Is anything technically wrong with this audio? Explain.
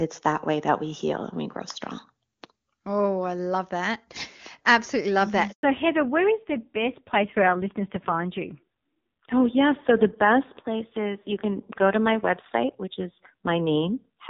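Yes, there are two faults. At 5.51 s, just after "love that", a handover gap occurs: no speech frames arrived while the call switched networks, so the speech cuts to silence for 120 ms. From 5.63 s to the end comes a fallback to narrowband, where the call left the clean HD Voice (AMR-WB) link for a low-rate narrowband codec, likely around AMR-NB 5.9 kbit/s. Nothing above 4 kHz remains, so the speech sounds duller and rougher.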